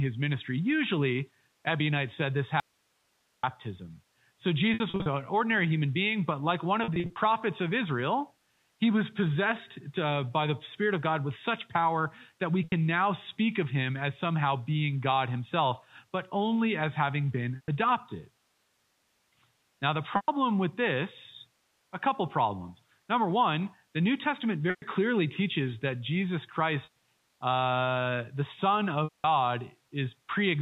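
Speech carried over G.711 telephone coding, so nothing above 4 kHz gets through, shows two faults. From 2.60 to 3.43 s the speech is cut for about 830 ms by an audio dropout to a faint residue. Only hiss remains, roughly 45 dB below the speech, so the path stayed live, likely because the input signal was lost upstream. The cut is abrupt at both edges. A natural pause would taper and keep room tone, not a flat hiss floor.

Packet loss with pitch repetition occurs at 4.74 s (ending just before "an ordinary human being"), 6.84 s (just after "being but like one"), 12.64 s (between "such power that we" and "now speak of him"), and at 17.56, 20.16, 24.70, 26.84 and 29.04 s. Each lasts between 80 and 200 ms. The shorter losses, such as 80 ms at 12.64 s, sound like a slightly held, buzzy syllable, because the last pitch cycle is replayed. The longer ones fade toward silence before the speech cross-fades back in. 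Unlike the dropout, these gaps are filled with repeated, voiced sound rather than hiss.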